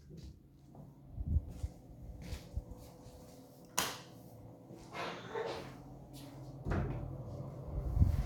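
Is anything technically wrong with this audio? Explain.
Yes. A brief stutter is heard at 2.30 to 2.32 s and again at 5.32 to 5.34 s, where about 23 ms of sound plays twice. This comes from overlapping chunks: the audio was handled in 3.0 s blocks, and each block began slightly before the previous one ended.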